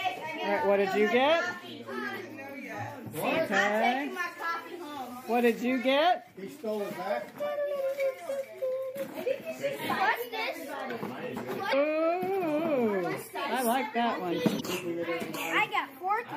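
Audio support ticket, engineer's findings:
Throughout: watery, swirly texture, treble cut off at a fixed ceiling, metallic chirps on bright transients, smeared attacks. Likely MP3 compression, plainly audible, fitting a 64 kbps encode starved of bits. Steady and continuous, unlike the brief isolated glitches below.

11.69–11.74 s and 14.57–14.61 s: short squawk or blip, about 44 ms each. Damaged data in a compressed stream; the decoder misreads corrupt frames and resyncs on the next header. Discrete events, not the constant compression smear.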